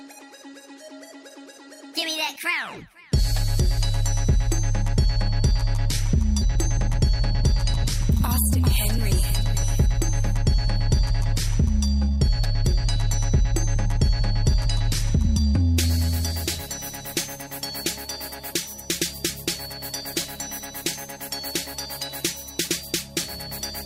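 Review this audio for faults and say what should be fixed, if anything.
A skip ahead occurs at 6.41 to 6.43 s. Playback jumps forward with no fill. About a second and a half of audio is gone. The two sides of the jump are joined almost directly, so the sound lurches abruptly. A stretch of audio was dropped, either in transit or by an overflowing jitter buffer, while later audio was already queued. Preventing it means sizing the buffer to absorb bursts and concealing losses rather than discarding queued audio.

A jitter buffer speed-up follows from 6.52 to 15.53 s. Playback runs at about 106% of normal speed. The pitch stays the same. The sound feels slightly hurried for those nine seconds. The buffer held more audio than its target, so the receiver repeatedly cut short pieces of one or a few pitch periods. Roughly half a second was trimmed in total. A gentler drain rate spread over a longer span would keep the speed-up less audible.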